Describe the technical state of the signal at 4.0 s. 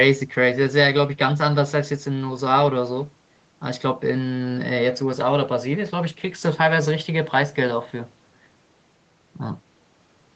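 At 4.0 s the speech is intact, with no fault present, only the expected effect of call microphone processing, which removes the lowest bass and leaves nothing above 8 kHz.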